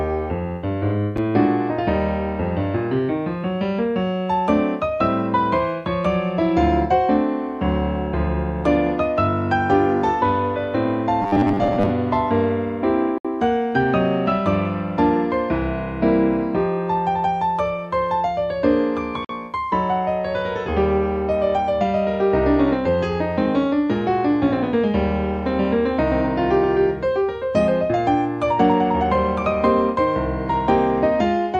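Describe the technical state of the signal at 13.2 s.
A gap between stream segments sits at 13.18 to 13.25 s: the timestamps of two consecutive segments, which appear to run about 6 s each, fail to meet, so the player fills the 64 ms hole with silence. The sound stops and resumes with hard edges, though nothing is missing.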